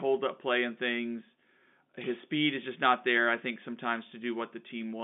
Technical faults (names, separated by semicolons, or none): none